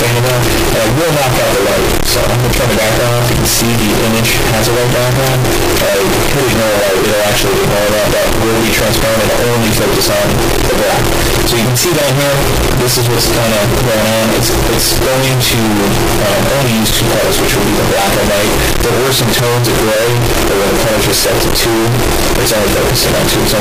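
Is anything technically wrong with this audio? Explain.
Yes. Float read as integer runs through the whole clip. The likely cause is 32-bit floating-point samples being read as 32-bit integers, so each sample's sign and exponent bits, not its true amplitude, set the output level. The waveform is pushed into a nearly square shape at an almost fixed, high level, however quiet the original was. The result is extremely loud and harsh, with background noise raised to the same level as the main sound, though pitch can still be followed.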